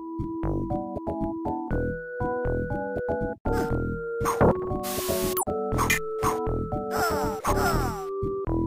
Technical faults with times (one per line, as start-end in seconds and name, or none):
5.77-6.11 CD scratch ticks